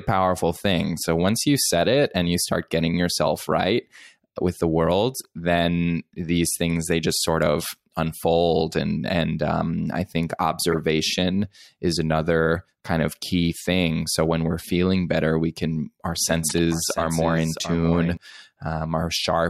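At 5.18 to 5.25 s, 10.72 to 10.76 s and 12.57 s, a corrupt frame is decoded as a brief chirp or noise blip. Damaged compressed data put energy at the wrong frequencies. On a spectrogram each appears as a short, misplaced smear lasting only one or a few frames. The bursts peak at about -20, -10 and -30 dBFS.

From 16.17 to 18.17 s a doubled audio track appears. A full-band copy, about 10 dB quieter, trails the speech by about 0.7 s. It is likely a second, slower capture path. It starts and stops abruptly, and the waveform shows the same shapes repeated at a fixed offset with no decay. Inside this span, at 16.48 to 16.59 s, another corrupt frame burst reaches about -10 dBFS.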